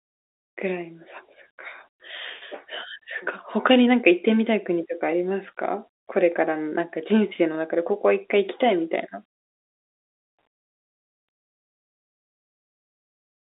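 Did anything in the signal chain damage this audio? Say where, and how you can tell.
No, nothing in the signal chain damaged this speech.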